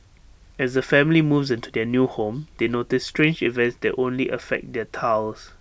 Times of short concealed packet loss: none

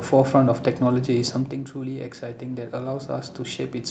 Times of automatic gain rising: 1.72-3.91

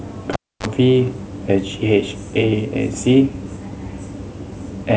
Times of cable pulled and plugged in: 0.33-0.66

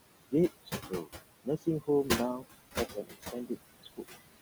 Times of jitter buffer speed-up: none

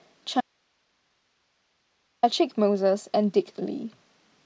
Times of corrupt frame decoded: none

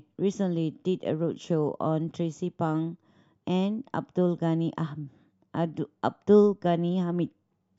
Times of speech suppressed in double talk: none

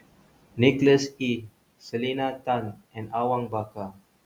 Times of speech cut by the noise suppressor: 0.01-0.59, 1.09-1.21, 2.73-3.12, 3.48-3.99

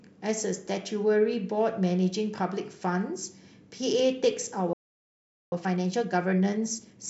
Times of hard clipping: none

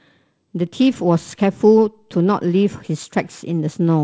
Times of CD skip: none

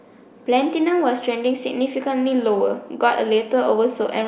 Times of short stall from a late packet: none

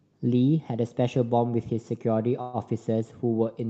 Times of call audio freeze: 2.41-2.56

